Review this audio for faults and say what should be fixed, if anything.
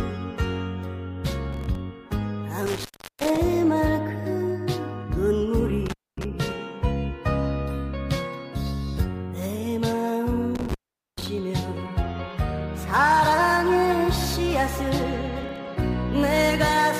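Processor overload crackle, at 1.53 to 1.75 s and again at 15.44 to 15.66 s: the processor fell behind and missed a run of short audio buffer deadlines back to back, and each missed buffer came out as silence. The tiny hard-edged gaps, consistent with buffers of roughly 3 ms and a handful missed in each burst, stack into a quick gritty crackle over the sound that stops once the load eases. Prevent it by raising the buffer size or reducing the processing load.

Intermittent contact, at 2.66 to 3.37 s, 5.86 to 6.25 s and 10.55 to 11.27 s: a loose cable or plug briefly broke the signal path. The sound cuts out for about 0.36 s, 0.24 s and 0.43 s respectively, with crackle where the connection breaks and remakes and faint hiss while the line is open. Prevent it by reseating or replacing the suspect cable and connectors.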